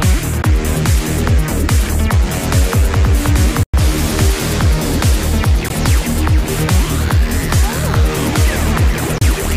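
Brief silent gaps cut into the sound at 0.42 s, from 3.63 to 3.74 s (about 100 ms, the longest), at 5.68 s, and from 9.18 to 9.22 s. Each has abrupt edges or a fade of a few milliseconds, and the sound resumes further along, as if it had kept playing. This is likely a Bluetooth dropout, where late packets were discarded before reaching the headphones.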